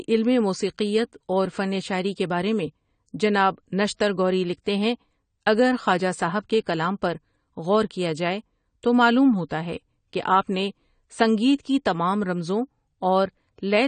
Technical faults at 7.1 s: AAC compression

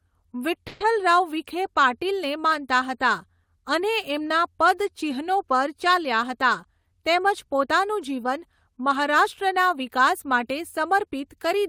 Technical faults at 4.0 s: none

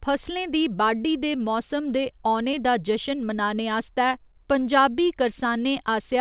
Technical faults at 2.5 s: short concealed packet loss

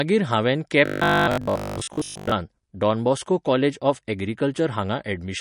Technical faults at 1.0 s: MP3 compression; robotic sound from repeated short buffers

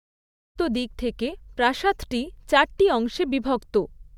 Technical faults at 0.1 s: none

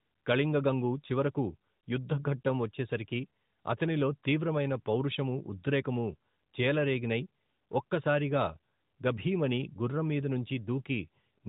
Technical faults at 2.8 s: none

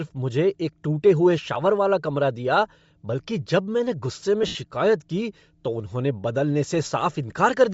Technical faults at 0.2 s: Bluetooth LC3 compression

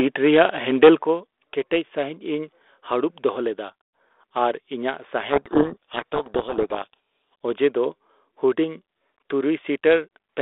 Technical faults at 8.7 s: none

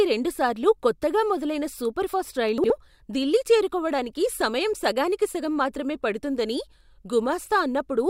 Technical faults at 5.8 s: none

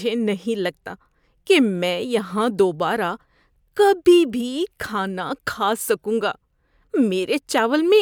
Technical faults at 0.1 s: resampler restarted on every block

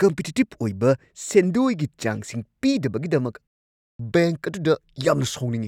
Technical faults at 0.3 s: none

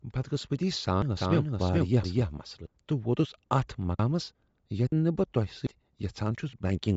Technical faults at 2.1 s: Bluetooth LC3 compression; doubled audio track; dropped buffer (overrun)

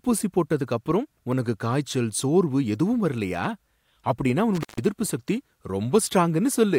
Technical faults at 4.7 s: intermittent contact

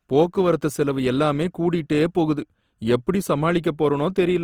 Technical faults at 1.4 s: Opus compression

